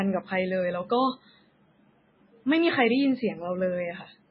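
From start to finish the speech has a hard ceiling at 5.3 kHz, with a watery, swirly texture and smeared attacks, which is what heavy MP3 compression does. The likely cause is an encoder starved of bits, around 16 kbps, cutting the treble and letting weak bands blink in and out.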